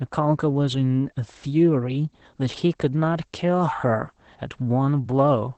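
Throughout, the speech sounds muffled, slightly hoarse and faintly robotic, with nothing above about 8.5 kHz. This is Opus voice compression, with its SILK coder, limited to wideband at a low bitrate, which fits roughly 12 kbps.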